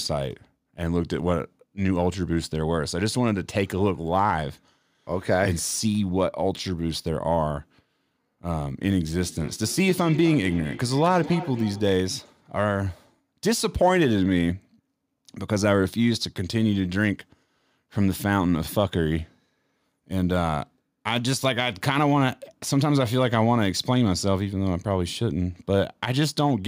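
From 9.2 to 11.93 s, the speech comes back on itself at a steady interval of roughly a third of a second, with the returns sounding thinner and more ringing than the original and peaking about 14 dB below it. This is feedback echo between two devices: two devices in the same room are on one call, and one plays the other's microphone signal aloud. That microphone hears it again, and neither echo canceller removes sound played by the other device.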